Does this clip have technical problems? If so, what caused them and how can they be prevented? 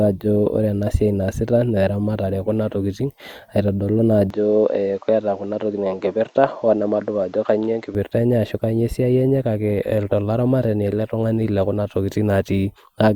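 Yes. From 4.30 to 7.95 s the input likely switched to a poorer device, passing nothing above 7.8 kHz, so the speech dulls without a gap. Fix the recording input to one device and turn off automatic device switching before recording.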